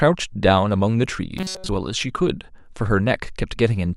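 From 1.38 to 1.69 s, new audio likely arrived too seldom, so playback looped its last few milliseconds while the real sound was skipped. This robotic sound from repeated short buffers fills most of the stretch and imposes a rigid 188 Hz metallic buzz, which fits a buffer of about 5.3 ms.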